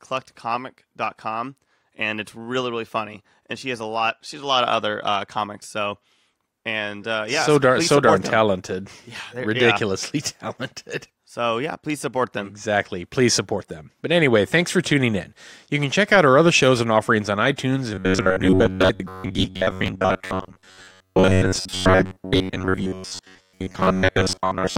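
From 17.94 s to the end, new audio likely arrived too seldom, so playback repeated a 10.7 ms buffer instead of most of the real speech. The repeats impose a fixed 93.8 Hz buzz, producing robotic sound from repeated short buffers: a rigid, metallic buzz.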